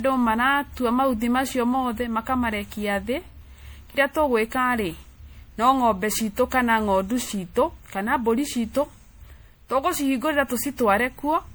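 Across the whole speech clip the sound has a swirling, watery quality, with hollow gaps in the spectrum and consonant attacks that smear instead of landing crisply. This is generation loss, and the likely cause is repeated lossy re-encoding: the texture points to an MP3 chain at around 96 kbit/s run through roughly seven times. Each pass quantised on a shifted frame grid, so the holes and noise accumulated beyond what a single encode would leave.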